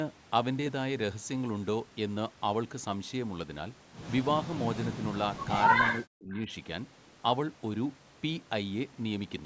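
From 5.93 to 6.49 s the speech is pulled down in pieces, for about four tenths of a second in total, with the deepest dips around 40 dB, so syllables thin out or vanish. This is speech suppressed in double talk, likely an echo canceller clamping down while both ends spoke at once. On a waveform the envelope collapses in notches; a spectrogram shows the bands fading to near-empty columns, already capped at 8 kHz by the call's normal microphone processing.

Within that stretch, from 6.34 to 6.4 s, a faint, brief scrap of delayed sound slips through, trailing the original by 361 ms and sitting about 25 dB below the speech. It is heard as a short ghost of the earlier speech. This is an echo leak, likely residual loudspeaker pickup the canceller failed to remove. A spectrogram shows a weak copy of earlier harmonic patterns inside the suppressed gap.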